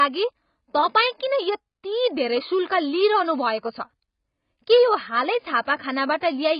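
From start to finish the speech carries heavy AAC compression damage. Nothing is heard above about 5.1 kHz, so the sound is dull and closed in. Sibilants turn fizzy and smeared, and sustained sounds warble. This is likely an AAC-LC encode at a very low bitrate. The result fits something near 16 kbps. At that rate the encoder drops the upper band entirely. It also quantises the remaining frequency lines coarsely.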